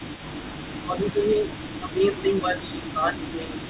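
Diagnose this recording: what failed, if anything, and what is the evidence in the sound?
A faint delayed copy of the speech runs from the start to the end, trailing about 333 ms behind and roughly 20 dB quieter. This is an echo leak at the call-processing stage. The far end's echo canceller likely failed to remove its loudspeaker pickup, and the residue was sent back.

From 0.72 to 1.44 s the speech dips, dropping by around 10 dB over roughly half a second in total. From 1.79 s to the end it sinks deeper, by around 15 dB. This is speech suppressed in double talk. Both sides were likely talking, and the echo canceller attenuated the talker along with the echo.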